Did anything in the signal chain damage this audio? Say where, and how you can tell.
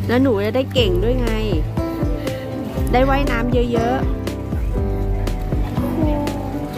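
No, nothing in the signal chain audibly damaged this audio, and no stage from wiring through playback leaves a mark I can point to.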